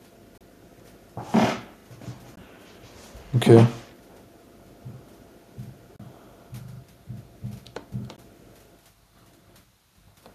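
Brief silences cut into the speech at 0.38 to 0.41 s, 2.36 s and 5.96 to 6.00 s. Each is a Bluetooth dropout, likely from audio packets arriving too late and being discarded. The gaps last 29 ms or 14.5 ms, which fits one or two lost packets. The speech resumes further on, as if it had kept playing.

From 6.64 to 6.80 s there is a repeated buffer. New audio arrived late, so the device replayed its last 40 ms piece four extra times. Each repeat meets the previous one at a hard join. It sounds like a quick, mechanical stutter.

One more dropout, 14.5 ms long, falls at 8.16 s.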